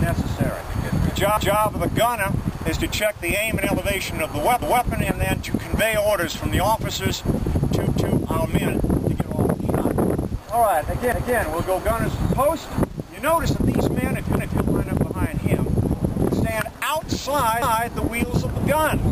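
Overlapping chunks at 1.37, 4.62, 7.87, 11.12, 14.37 and 17.62 s: the audio was joined in 3-second blocks, each starting 250 ms before the previous one finished, so a quarter-second slice plays twice at every seam, heard as a recurring stutter.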